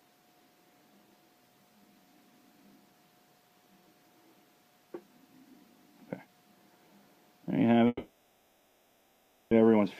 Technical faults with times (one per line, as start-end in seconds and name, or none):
7.87-9.54 long network dropout